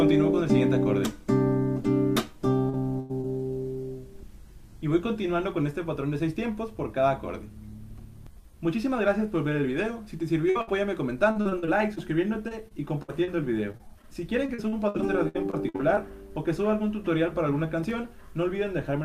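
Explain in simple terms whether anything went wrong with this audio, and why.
Several things went wrong, all with the connection or the cable.

Short concealed packet loss happens at 2.69 s and 3.21 s. Bits of sound arrived too late. The receiver patched each hole, about 40 and 20 ms, with a brief smear.

A burst of packet loss hits at 2.99 s, losing about 100 ms. Two more follow at 10.50 s and 10.61 s, about 60 ms each. The gap is filled by stretching the last sound while fading it. Then the audio jumps ahead.

Repeated packet loss (robotic sound) runs from 11.3 s to 16.0 s. There are 23 small gaps, the longest 62 ms. About 15 percent of that stretch is patched, so it sounds choppy and robotic.

Loose connector crackle appears from 17.84 s to 17.91 s. A bad contact kept breaking and reconnecting. It is heard as a short burst of scratchy crackle.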